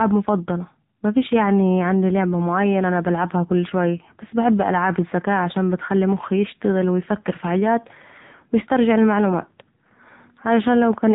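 Speech, with the AMR narrowband mobile codec applied throughout. Nothing above 4 kHz survives, so the sound is band-limited to telephone width and sibilants lose their edge. The coder rebuilds the voice from a vocal-tract model excited by sparse pulses in short 20 ms frames, and here the damage is heavy: the result is buzzy and synthetic. That degree of coarseness points to one of the low AMR-NB modes, around 6.7 kbps.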